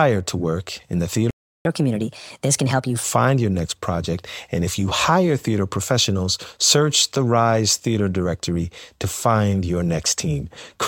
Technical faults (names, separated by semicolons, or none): playback stall; catch-up at higher speed